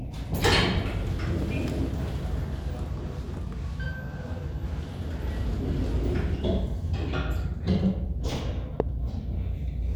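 At 1.42 to 1.44 s there's a loud pop, a single sharp hit roughly 10 dB above the sound, and another at 8.80 to 8.82 s, much harder at roughly 20 dB. Each is likely a voltage spike from a plug, switch or static, with the sound carrying on underneath.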